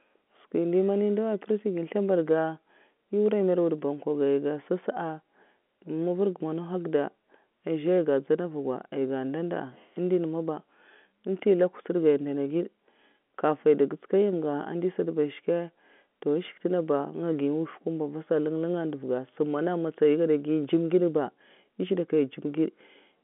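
No technical faults can be heard anywhere in this speech clip.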